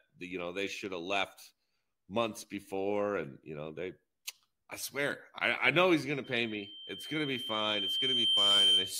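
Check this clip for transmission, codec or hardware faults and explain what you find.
One hardware fault is present. Loudspeaker feedback squeal runs from 6.24 s to the end of the clip. A microphone is picking up the loudspeaker it drives, and around 3.1 kHz the loop gain climbs past unity, so that frequency keeps reinforcing itself. It is heard as a single piercing tone that swells over roughly two seconds until it sits around 10 dB above the speech, still ringing when the clip ends.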